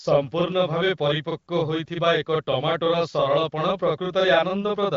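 From start to finish the speech carries a channel delay (doubling): one side of the stereo signal runs 40 ms behind the other, and summing to mono lays the late copy over the original at equal level. Every onset arrives twice, giving a thickened, slapped doubling. A room's reverb tail decays, but here there is one repeat and no tail. The gap is too long for the hollow comb-filter tone of a sub-millisecond offset. The wideband phone bandwidth stops near 7.5 kHz.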